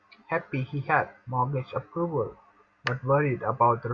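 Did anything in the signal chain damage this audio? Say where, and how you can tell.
No, nothing in the signal chain damaged this speech.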